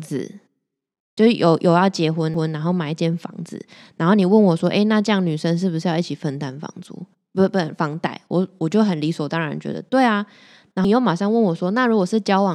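Ticks with abrupt jumps in the speech at 2.34 s and 10.84 s are CD skips: the player mutes for a few milliseconds and resumes on another spiral turn.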